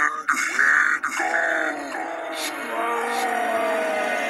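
A second capture path or an out-of-step edit has likely mixed the same audio in twice, giving a doubled audio track for the whole clip: a full-band copy trails roughly 0.7 seconds behind, only a few dB quieter, with no decay or room colour.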